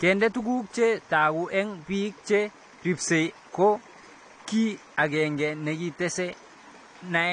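Throughout, the speech sounds dull and smeared with fizzy sibilants. On a spectrogram, energy stops sharply at 9.6 kHz, pointing to likely AAC compression near 32 kbps.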